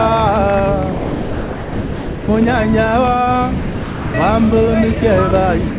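A voice detector likely judged the sound as background and stopped sending from 0.92 to 2.28 s and again from 3.6 to 4.14 s. Each gap, about 1.4 s and 0.5 s long, is filled with steady comfort noise until the sound returns. At 5.31 to 5.38 s a brief electrical pulse, likely from a plug, switch or driver glitch, produces a loud pop heard as two sharp clicks, peaking roughly 5 dB above the sound, which carries on underneath. From 5.7 s to the end, the sound drops to comfort noise again for about 90 ms, likely the same voice detector cutting it off. The call path's band limit at 4 kHz holds throughout.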